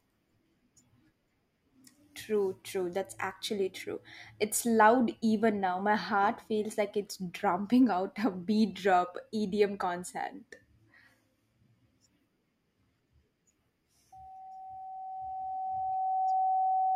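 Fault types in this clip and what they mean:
Loudspeaker feedback squeal: the mic is hearing its own loudspeaker, and around 758 Hz the loop gain tips past one, so that tone feeds on itself. It creeps in at 14.12 s, swells over roughly two seconds to about speech level, and rings through to the end.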